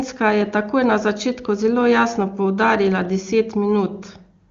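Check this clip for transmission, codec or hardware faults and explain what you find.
Nothing in this speech recording stood out as a problem on listening.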